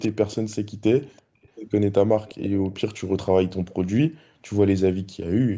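Speech with an echo leak: a faint copy of the voice trailing about 0.35 s behind, roughly 20 to 40 dB down, in scraps at 0–0.09, 0.31–0.56, 1.02–1.22, 1.43–1.48, 2.26–2.48 and 2.64–2.81 s. That's likely a far-end loudspeaker whose echo canceller didn't fully remove the pickup.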